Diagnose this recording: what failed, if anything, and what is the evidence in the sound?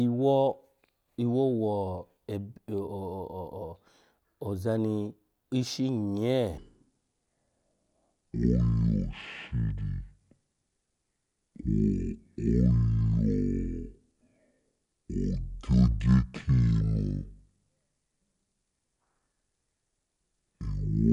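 A playback or editing stage likely ran this section against the wrong clock, at half speed. From 6.57 s to the end, starting just before "ya gbeho kole", the speech slows to half its pace and drops about ten semitones, turning deep and drawn out.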